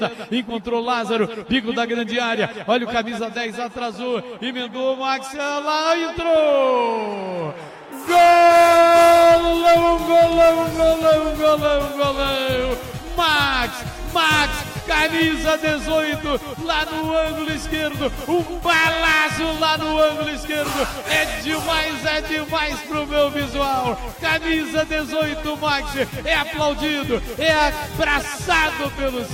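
Nothing stood out as a technical problem on listening.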